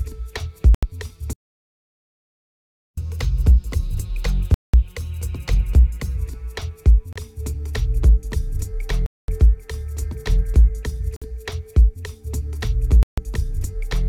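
The sound drops to silence for 81 ms at 0.75 s. Brief gaps like this recur across the clip. At 4.54 s there is 194 ms of silence, and at 7.13 s just 30 ms. At 9.06 s the gap is 221 ms, at 11.16 s 54 ms, and at 13.03 s 146 ms. Each is likely a Bluetooth stall. Radio interference delays packets, the headphone buffer empties, and output waits for the resent data.

From 1.33 s to 2.97 s the audio stops mid-flow for 1.64 s. That is far longer than the short dropouts. This is likely a playback stall. The player ran short of data or its thread was held up, so nothing reached the output until it recovered.

At 2.97 s the player starts a catch-up at higher speed. It runs at 1.1 times normal speed until 6.17 s. Pitch rises by about one and a half semitones, so the sound seems slightly hurried and raised. The player is resampling its backlog to recover the time lost in the stall. At 6.17 s speed and pitch return to normal. 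The 194 ms dropout at 4.54 s falls inside this faster stretch.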